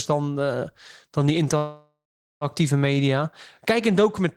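From 1.57 s to 2.44 s there is a call audio freeze: the last sound carries on as a fading buzz or hiss, then 0.42 s of silence. The speech resumes where it stopped, with nothing lost, 0.84 s later, likely because delayed packets emptied the jitter buffer.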